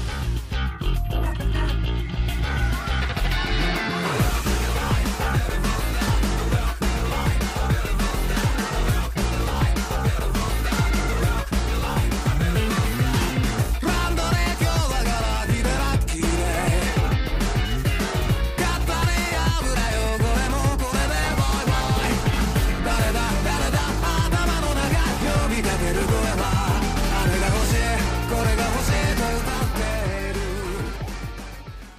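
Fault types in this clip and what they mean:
GSM phone buzz: A nearby GSM handset sends radio bursts 217 times a second. The audio circuit rectifies them. From 21.79 to 22.80 s, a hard, raspy 217 Hz buzz with many harmonics holds steady, as in a call. It sits about 14 dB below the signal.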